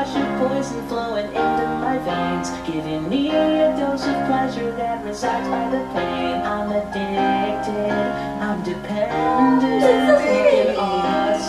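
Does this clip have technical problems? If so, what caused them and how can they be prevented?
No, nothing in this one stands out as a technical problem, so there's nothing to trace back or guard against here.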